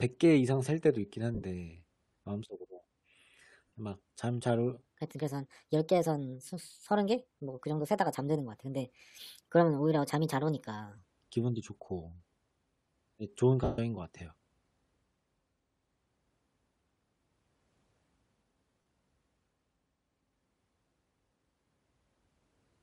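Throughout, the speech carries a breathy, grainy top edge, likely from Bluetooth LC3 compression at 48 kbps. On a spectrogram, the upper bands look patchy and noise-filled rather than cleanly harmonic, with short time-blocks that fit 7.5 ms frames.

At 1.35 to 1.43 s, lost LE Audio frames remove about 60 ms scattered over 75 ms, with the longest gap near 50 ms. The decoder repeats the last spectrum with scrambled phase, so the sound smears into hiss. Further losses occur at 3.68 to 3.72 s (37.5 ms), 13.64 to 13.78 s (142.5 ms, long enough to fade toward silence) and 18.82 to 18.86 s (45 ms). Each shows as a blurred, harmonic-free patch, and the longest tapers in the waveform.

From 4.88 to 10.98 s, a section at the wrong speed runs 1.26 times too fast, likely from playback against a mismatched clock. Pitch rises about four semitones and the delivery sounds hurried. On a spectrogram, the harmonics sit higher and more widely spaced, then drop back at the boundary.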